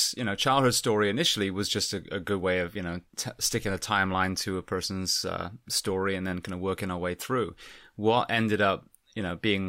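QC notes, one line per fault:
No faults heard on this speech recording.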